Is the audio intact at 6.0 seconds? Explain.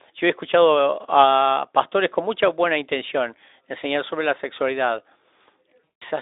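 No. At 6.0 s the clip is inside a stretch of VoIP packet loss concealed by the speech codec, running from 5.84 to 6.03 s. About 180 ms of audio went missing, which fits a run of nine 20 ms frames. The decoder filled the gap by repeating its last pitch and filter shape while lowering the level. The speech smears into a fading buzzy tone or coloured noise. It stays thin after the stream resumes, within the narrow Speex telephone band.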